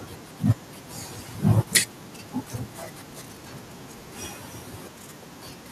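From 1.50 to 1.77 s the speech picks up a harsh, crackling edge on its loudest peaks, the sound of microphone overload. The waveform tops are flattened where the signal runs out of headroom, by about 9 dB at worst, and around one percent of samples in that stretch are clipped. The likely cause is an input gain set too high, driving the peaks into the converter's ceiling.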